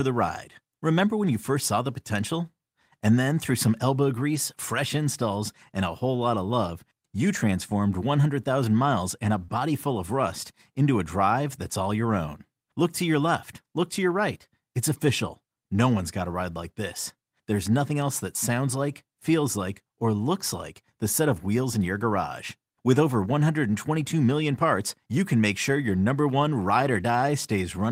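At 4.35 s a packet went missing, but the one after it carried a low-bitrate backup copy, so the decoder played that instead. This is a lost packet rebuilt from error correction. There is no gap, just a 20 ms patch, consistent with one lost packet, that sounds coarse and hissy next to the surrounding speech.

At 9.45 to 9.50 s a stretch of audio arrived too late to decode, and the receiver had no copy to fall back on. This is a short concealed packet loss. The decoder covered 20 ms of missing sound by extending what came just before, either from its pitch or as shaped noise, and stretched the fill to 26 ms so it could blend back into the real signal. You hear this as a brief smear or wobble.

Right after it, from 9.50 to 9.56 s, a second rebuilt-from-error-correction span follows. This one is 40 ms, which fits two packets recovered from their low-bitrate copies. It sounds rougher and noisier than the speech around it, and because it runs straight on from the concealed gap the whole disturbance lasts about a tenth of a second.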